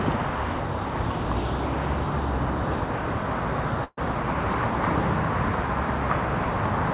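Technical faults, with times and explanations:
3.84 to 3.99 s, burst of packet loss: packets never arrived in time, so the receiver filled about 130 ms by stretching the last sound and fading it down, ending in about 30 ms of silence; the audio then resumes 120 ms further on, over a call path with nothing above 4 kHz.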